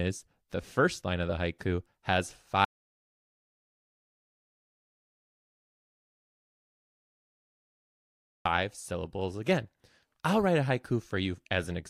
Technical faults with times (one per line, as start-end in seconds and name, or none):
2.65-8.45 audio dropout to silence